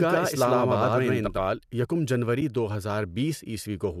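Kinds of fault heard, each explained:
Doubled audio track: from the very start until 1.46 s, a second full-band copy of the speech runs about a tenth of a second behind at roughly equal level, likely a slower second capture path, cutting off abruptly with no decay or room colour.
AAC frame loss with muting: at 2.41 s one short stretch of about 10 ms dips briefly, the decoder zeroing the lost frame's spectrum while overlapping windows fade the sound softly out and back in, over what is likely low-delay AAC compression at light damage.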